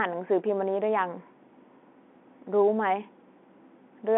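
Nothing faulty in this speech; the narrow band, roughly 200 Hz to 3.5 kHz, is just the G.711 telephone coding it was carried over.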